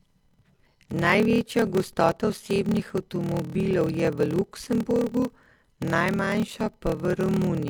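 From start to end, the speech carries a block size mismatch (padded): each block, which fits 1024 samples, is zero-filled to a longer read size. This gives a 38.3 Hz buzz and playback at 0.889 speed, near normal pitch. The waveform shows regular flat gaps; the spectrogram, evenly spaced vertical stripes.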